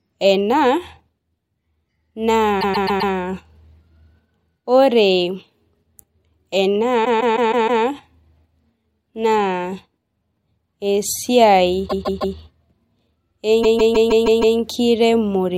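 Repeated frames at 2.60–3.12 s, 7.04–7.83 s, 11.87–12.34 s and 13.62–14.57 s: a short block of about 130 to 160 ms, consistent with a run of five or six compressed frames, is replayed several times. Each event produces a stutter and stretches the speech by up to 0.94 s.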